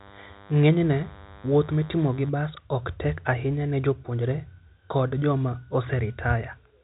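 From 0.0 to 2.29 s, DECT cordless phone buzz sits under the speech, stopping before "bas ok tek ahinya". A nearby DECT phone or base station's 100 Hz radio bursts are rectified into a thin, harmonic-rich buzz, roughly 25 dB below the voice.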